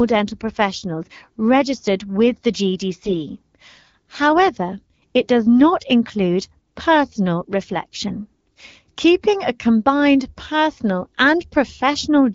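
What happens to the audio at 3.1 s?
Just after "professionals registered with the", from 3.01 to 3.14 s, the speech turns hoarse and gargly while keeping roughly its pitch and level. These are AMR bit errors: flipped low-priority bits, at a rate of around 7 percent, misplace the excitation pulses and skew the finer pitch, gain and spectral values across roughly seven frames.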